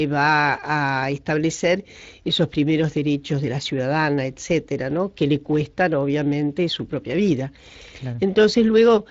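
The speech in this clip passed through the Speex codec for its whole length. Speex is a CELP coder that models the voice and spends its limited bits on the excitation signal driving that model. Here the damage is plainly audible, consistent with a mid-range bitrate around 20 kbps. The coarsely coded excitation leaves the voice sounding noisy and hoarse throughout, instead of clean and natural.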